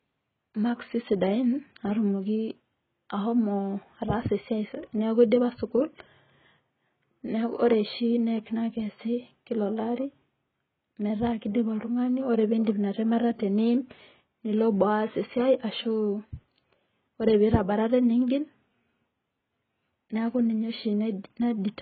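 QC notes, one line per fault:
Throughout: AAC compression, likely AAC-LC at a very low bitrate. Nothing is present above 4.6 kHz, so the speech sounds dull. Below that the damage is heavy: sibilants turn fizzy and sustained vowels warble as frames are starved of bits and bands are left with holes or patched with substitute noise. That smeared, swirling texture separates it from a plain low-pass filter, which would remove the top but leave the lower band clean. The depth of damage fits roughly 12 kbps.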